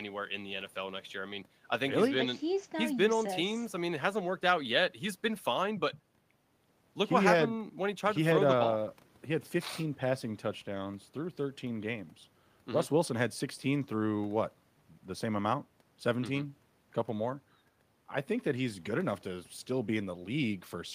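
No technical faults are audible.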